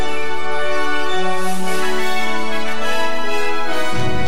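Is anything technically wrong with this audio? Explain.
Yes. A DC offset runs through the whole clip: the entire waveform sits shifted away from zero by a constant amount of about -11 dBFS. A fixed bias like this is inaudible in itself, but it eats into headroom, so peaks on one side reach full scale sooner, and it appears as steady energy at 0 Hz. Unlike hum or rumble, which oscillate at a low frequency and can be heard, this is a fixed displacement with no pitch.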